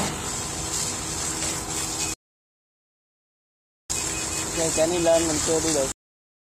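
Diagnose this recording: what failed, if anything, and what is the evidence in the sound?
Playback-side failure: a rebuffering stall, twice. At 2.14 s the sound drops to dead silence and sits there until 3.90 s, about 1.76 s, then picks up exactly where it left off, with nothing skipped. At 5.92 s it stalls again, and the clip ends still silent. That's the player draining its download buffer faster than data arrives, then pausing until it can refill.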